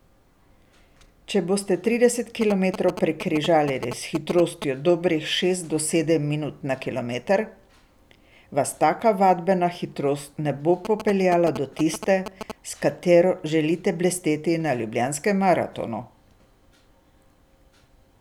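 GSM signalling bursts at 2.42–4.64 s, after "boste trideset", and 10.85–12.52 s, after "vadbena hitrost ne bo": a nearby 2G phone's rectified radio pulses gallop through as short 217 Hz buzzes, just under the speech.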